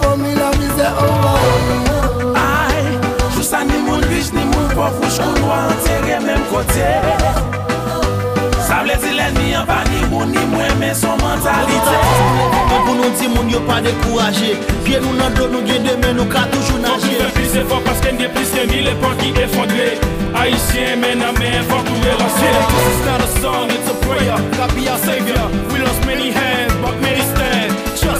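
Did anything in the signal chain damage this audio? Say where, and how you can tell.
No, nothing in the chain from capture through to playback leaves an audible mark on this audio.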